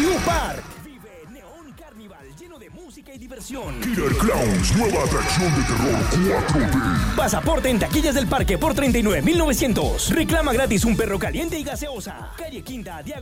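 Zipper noise runs from 10.88 to 12.14 s, where the level drops by around 15 dB in unsmoothed steps of about 3 dB, roughly four a second. Each step is a small click, so the sound ticks as it fades. On a waveform the envelope falls as a staircase rather than a slope. On a spectrogram each step shows as a faint vertical broadband line.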